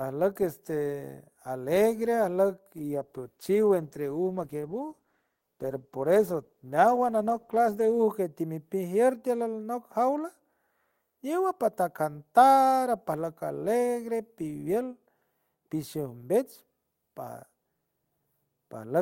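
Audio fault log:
2.79–8.11 s, call bitrate drop: the speech turns rough and watery with the top end dulled, which fits the encoder falling from around 40 kbps to about 13 kbps for just over five seconds, coding coarsely and trimming high frequencies until the rate recovers.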